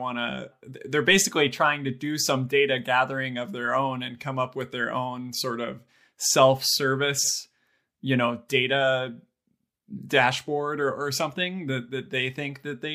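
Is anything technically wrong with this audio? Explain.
Yes. Frames out of order, 7.18 to 7.29 s: two neighbouring 52.2 ms blocks were decoded swapped, so the speech there flutters, garbled.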